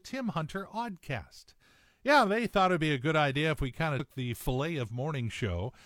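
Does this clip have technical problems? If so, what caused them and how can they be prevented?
Yes. At about 3.95 to 4.00 s the speech is broken by a brief glitch lasting roughly 50 ms, a blip that doesn't belong to the recording. This is damaged data in a compressed stream: some bytes in that part of the encoded file were lost or corrupted, so the decoder misread the affected frame, lost sync, and had to hunt for the next valid frame header before clean playback resumed. To prevent it, transfer and store compressed audio over checked, error-free paths and verify file integrity with checksums before decoding.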